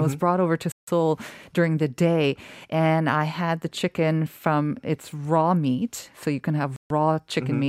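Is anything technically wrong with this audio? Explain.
Yes. The speech cuts to silence twice, at 0.72 to 0.88 s (about 160 ms) and 6.76 to 6.91 s (about 140 ms), then resumes. This is likely a Bluetooth stall, where delayed packets drained the headphone buffer.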